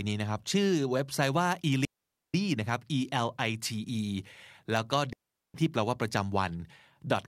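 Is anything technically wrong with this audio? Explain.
Yes. The speech suffers two digital wireless dropouts, at 1.85 to 2.34 s and again at 5.13 to 5.54 s. In each case the radio link between transmitter and receiver lost too much data for the receiver to rebuild the signal, so it muted itself with a very quick fade. The result is a clean hole of near silence, about 0.49 s and then 0.41 s long, with no hiss, crackle or noise burst on either side.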